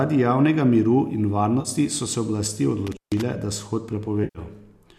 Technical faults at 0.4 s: none

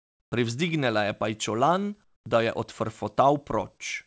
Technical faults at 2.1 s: comfort noise in place of the background

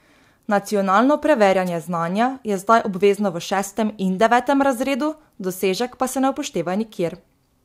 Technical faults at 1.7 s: wireless microphone noise hit

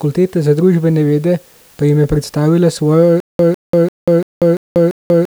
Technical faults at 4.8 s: stutter with silent gaps

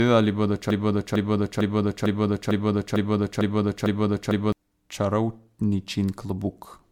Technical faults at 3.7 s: generation loss; broken-record loop

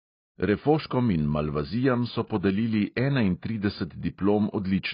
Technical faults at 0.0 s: AAC compression

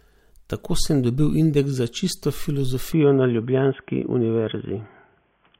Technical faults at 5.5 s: input switched to a poorer device

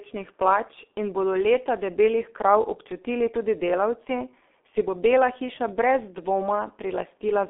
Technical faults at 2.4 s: G.723.1 codec

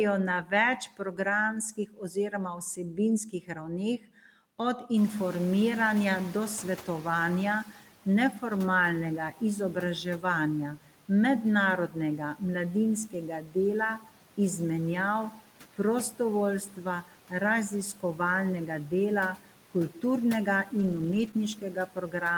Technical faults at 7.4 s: noise suppressor artifacts; noise suppressor catching up; speech cut by the noise suppressor

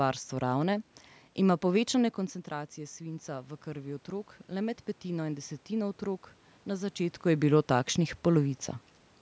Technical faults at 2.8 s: automatic gain rising

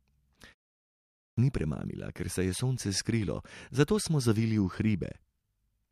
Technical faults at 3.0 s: none

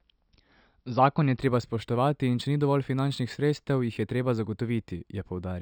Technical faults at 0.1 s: none

